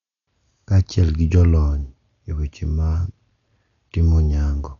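Throughout the speech, nothing sounds above 7 kHz, so it is dull and muffled. Heavy codec damage adds rough, fluttering noise around tonal parts. This is likely Dolby Digital compression at a bitrate near 48 kbps. Starved high bands lose their detail and come back as noise.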